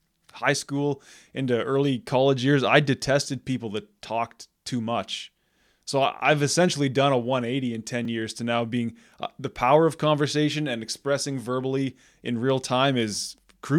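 At 8.05 s, just before "years to now being", the speech has a block of digital silence lasting about 2.7 ms. The signal drops straight to silence and returns with no fade, so both edges are abrupt steps, and at this length they are heard as a brief tick or dip rather than silence. The length points to one 128-sample output buffer left empty because the playback process did not fill it in time.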